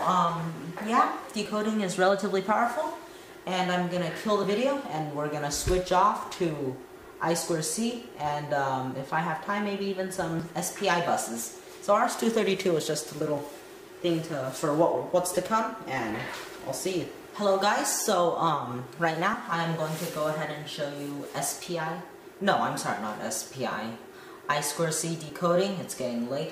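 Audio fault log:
1.46, 4.44, 7.42, 10.40, 13.38, 22.32, 25.30 s: audio missing between chunks. Brief skips of about 20 ms recur about every 3 s, likely from losing audio at each chunk handover. The waveform shows abrupt splices, and the spectrogram shows thin vertical broadband lines.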